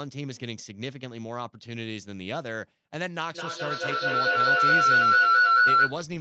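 From 3.34 to 6.05 s a feedback howl builds around 1.5 kHz, with the loop repeating roughly every 200 ms and peaking about 13 dB above the speech, as two devices share a room.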